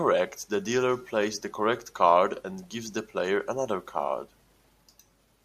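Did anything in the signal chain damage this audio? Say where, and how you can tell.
No, nothing stood out on listening to this speech recording as damage introduced anywhere along the signal chain.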